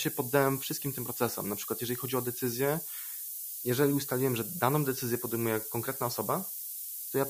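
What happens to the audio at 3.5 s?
At 3.5 s the speech sits under low bit depth with noise shaping, a fault that runs through the whole clip rather than starting there. With only 5 bits, the rounding error is large, and feedback pushes it into the upper band, giving a steady, thin hiss that climbs toward the top and sits roughly as loud as the speech. Plain truncation would instead give gritty distortion that follows the signal and changes character as the speech gets quieter.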